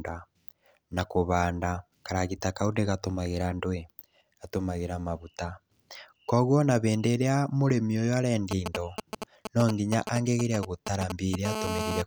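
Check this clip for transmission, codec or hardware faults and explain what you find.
Two hardware faults appear near the end, both interference from a nearby 2G phone picked up by the audio circuitry.

From 8.51 to 11.36 s, a galloping dit-dit-dit of brief 217 Hz buzzes sits nearly as loud as the speech. These are GSM signalling bursts: short radio bursts from the phone, rectified by the audio circuit.

From 11.45 to 12.02 s, a hard, raspy, harmonic-rich 217 Hz buzz runs steadily, about 4 dB below the speech. This is GSM phone buzz, from continuous call-mode bursts being rectified.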